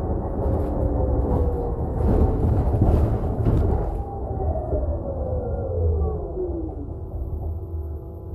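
At 2.42 to 2.57 s, 5.44 to 5.63 s and 7.32 to 7.51 s, the audio has frames out of order. Two adjacent blocks, about 70 ms each in the first case and about 93 ms in the other two, were swapped before decoding, so each stretch plays its halves reversed. The result is a brief garbled flutter. Unlike a dropout or a repeat, nothing is missing or duplicated, and the timing afterwards stays intact.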